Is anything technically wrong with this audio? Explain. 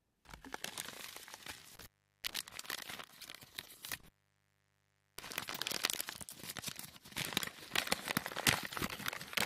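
Yes, there are two kinds of fault, each occurring twice.

Intermittent contact occurs between 1.75 and 2.35 s, where the signal drops out for about 0.38 s, and again between 3.91 and 5.35 s, with a longer dropout of about 1.1 s. A loose plug or cable briefly breaks the connection, so the sound vanishes, with crackle as the contact opens and closes. On a waveform the amplitude collapses to a thin band of hiss, with spiky bursts at each edge. A spectrogram shows a dark gap with broadband vertical streaks at its boundaries.

Damaged data in a compressed stream appears as short blips at 2.88 s and 5.55 s. Corrupted bytes make the decoder misread frames, lose sync and hunt for the next valid header, producing a brief chirp or squawk. In the waveform each blip is a tiny, abrupt discontinuity. On a spectrogram it shows as a narrow smeared column of odd, blocky energy unrelated to the surrounding content.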